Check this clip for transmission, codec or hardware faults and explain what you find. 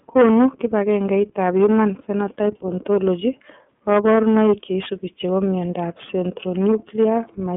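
The speech passed through an iLBC codec for its whole length. The iLBC codec coded each frame's excitation separately, which fits its 30 ms, 13.33 kbps mode, over a 200 Hz to 3.4 kHz band. This leaves the speech muffled, rough and plainly synthetic.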